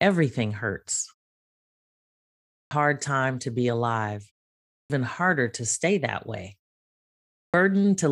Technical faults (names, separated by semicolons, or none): clipped start after a pause